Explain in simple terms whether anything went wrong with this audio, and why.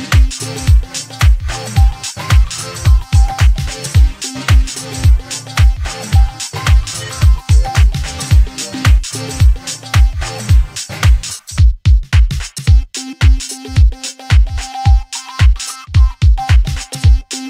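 Nothing went wrong here: no faults can be heard anywhere in the recording.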